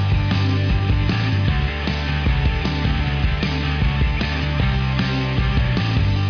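Nothing here calls for comment, since the audio runs its whole course without a single technical fault turning up along the way.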